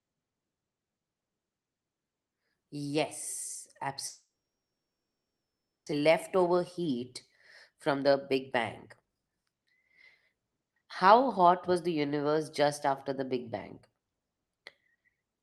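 From 4.07 to 5.94 s the speech dissolves into a fading buzz and then near-silence, likely a long network dropout. The waveform flattens and the spectrogram goes almost blank.

Jitter buffer speed-ups follow, trimming pitch periods to shed built-up delay. The speech sounds hurried at unchanged pitch: about 7% faster at 6.02–7.09 s, 24% at 7.70–8.60 s, 40% at 9.00–9.86 s and 8% at 10.28–11.94 s. Syllables look compressed in time while the harmonic spacing stays the same.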